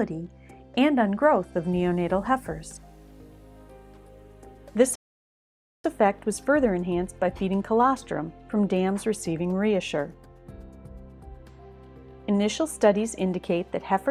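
At 4.95 s the sound drops to silence and stays silent until 5.84 s, then picks up exactly where it stopped. This is a rebuffering stall: playback ran out of downloaded audio and paused for new data, inserting about 0.89 s without losing any material.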